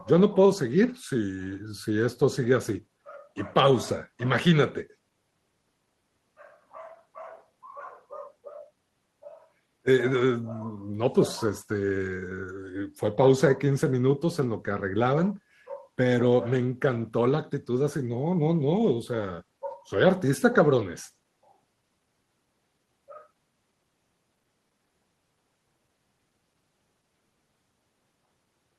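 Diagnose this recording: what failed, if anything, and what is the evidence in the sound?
No stage from capture through to playback leaves any audible evidence of failure in this speech recording.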